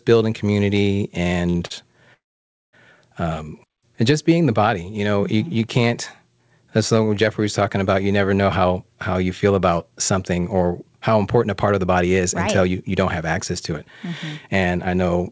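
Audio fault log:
1.50–1.56 s, 1.56–1.62 s, 1.66–1.72 s: short stall from a late packet. Just after "building community", late packets emptied the jitter buffer, so the last sound is held for about 46, 35 and 42 ms each time before continuing. Nothing is lost.
2.14–2.75 s: call audio freeze. Packets were likely delayed in transit. The last sound trails off and roughly 0.54 s of silence follows before the audio resumes where it stopped.
8.64–9.92 s, 10.32–13.22 s, 13.72–14.08 s, 14.48–15.23 s: jitter buffer speed-up. An overfull buffer made the receiver trim tiny pitch-period slices, so the audio runs at 109%, 112%, 107% and 114% speed at unchanged pitch and sounds hurried.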